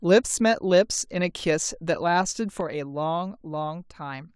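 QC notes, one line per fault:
2.61–4.36 s, one channel drops out: at 2.61 s the level falls abruptly by about 6 dB and stays down to the end of the clip, with no fade. One side of the stereo pair has likely gone silent, so after the mono sum only half of the speech common to both channels remains. The waveform shows a clean step down in envelope height at 2.61 s, and the spectrogram darkens uniformly across all frequencies from that point, with no change in spectral shape.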